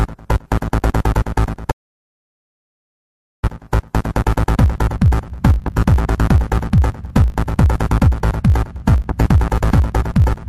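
From the first moment to the end, the audio carries a filter restarted on every block: the filter discards its memory at each block boundary and starts again from silence, so every block opens with a small transient. Those clicks repeat 50 times a second, which points to blocks of about 20 ms, and they fuse into a buzz that rises and falls with the signal's level. A spectrogram shows a comb of lines at 50 Hz and its harmonics, and the waveform shows evenly spaced glitches.

At 1.72 s the sound cuts off abruptly in an audio dropout to silence, and it resumes at 3.43 s, so about 1.71 s of material is gone. The gap is silent with no room tone, most likely because the input was lost while the recorder kept writing zeros. On the waveform it is a flat line, and on a spectrogram it is a dark band with hard vertical edges at both ends.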